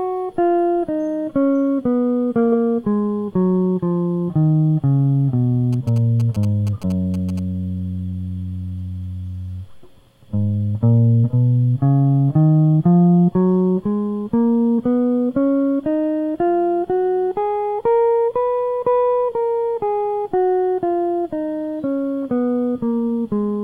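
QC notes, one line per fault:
5.73–7.39 s: GSM signalling bursts. A galloping dit-dit-dit of short buzzes cuts in over the music, sitting roughly 20 dB below it. The buzz repeats at 216.7 Hz, the TDMA frame rate of a 2G handset. A nearby phone in its signalling state transmits brief groups of RF bursts rather than a continuous carrier. Somewhere in the analogue chain a junction rectifies that RF, turning each group into an audible packet of 217 Hz buzz.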